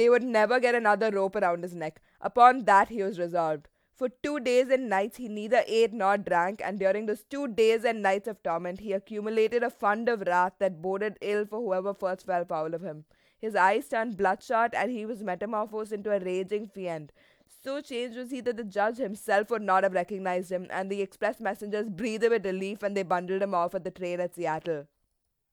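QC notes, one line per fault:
Nothing stood out on listening to the speech in this clip.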